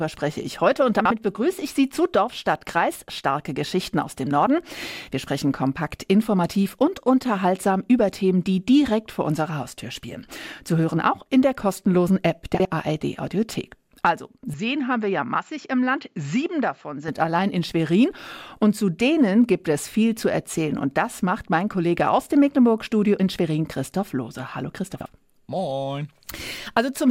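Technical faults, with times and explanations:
1.00–1.11 s, 12.55–12.65 s, 24.95–25.06 s: frames out of order. Two adjacent blocks of about 52 ms play swapped, giving a garbled flutter; the waveform shows discontinuities at three joins.
14.54–17.08 s: input likely switched to a poorer device. The sound turns dull and a little quieter, with a faint new noise floor. On the spectrogram, energy stops sharply above 7.6 kHz, with no gap at the switch.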